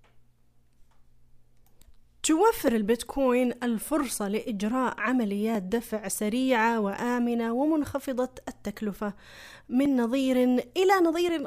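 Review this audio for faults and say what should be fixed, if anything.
Clock drift buffer slips: a click every 1.44 s from 1.25 to 11.29 s, likely from mismatched device clocks dropping or repeating a few dozen samples. Each shows as a thin vertical spectrogram line. Prevent it by locking both devices to one shared clock or adding asynchronous sample-rate conversion.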